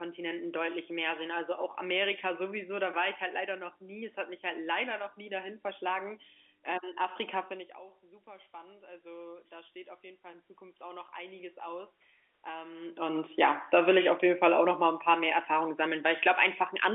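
Just after 8.24 s there's automatic gain rising: the talker seems to drift back around 7.5 s, the input drops by about 19 dB, and the gain control creeps up by about 11 dB through 13.06 s. Voice and room noise swell together, so the background climbs too.

Then the talker comes back close around 13.0 s, and from 13.62 to 16.32 s you get automatic gain falling. The level starts hot and the gain backs off by about 4 dB, so voice and background sink together over a couple of seconds, all within the narrow telephone band.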